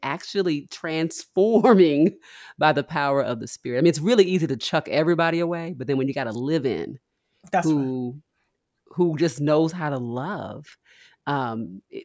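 No technical faults occur anywhere in this speech recording.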